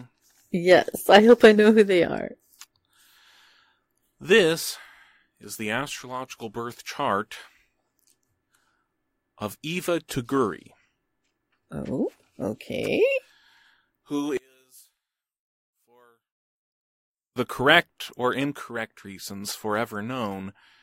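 From 14.37 to 17.36 s, one channel was likely inverted, its polarity flipped against the other, so the identical centre content cancels when the pair is summed to mono. The speech drops by about 34 dB, leaving only a faint residue.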